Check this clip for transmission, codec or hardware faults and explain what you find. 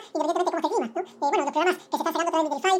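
One fault runs through the whole clip. It is audio read two samples at a time (double speed). Each pair of samples is taken as one frame, so playback runs twice as fast and a full octave (12 semitones) high. A spectrogram shows content stretched upward and time-compressed. The waveform looks squeezed horizontally.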